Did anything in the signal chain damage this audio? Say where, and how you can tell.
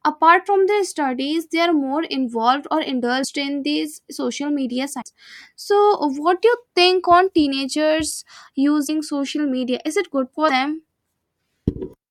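Yes, in the codec. Brief skips occur at 3.23–3.26 s, after "are more involved or", then 5.01–5.03 s, 8.87–8.90 s and 10.48–10.51 s. Each is about one 24 ms frame long. The likely cause is a broken MP3 bit reservoir: after a cut, the next frame reads borrowed bits from the wrong frame.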